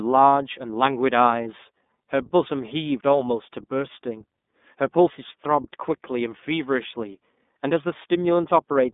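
Speech, coded throughout by the iLBC codec, with plainly audible codec damage. The band is squeezed to roughly 200 Hz to 3.6 kHz, with nothing above 3.7 kHz, so sibilants and breath lose their top end and the sound is narrowband and telephone-like. Each frame's excitation is coded independently, leaving a slightly rough, synthetic texture consistent with 30 ms frames and the 13.33 kbps mode of iLBC.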